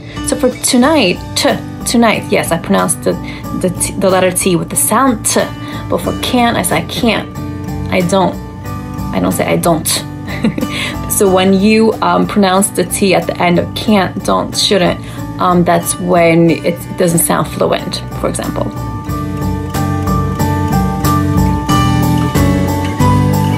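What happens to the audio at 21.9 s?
Nothing goes wrong at 21.9 s; the audio plays through intact at that point, with no dropout, click, glitch or other fault.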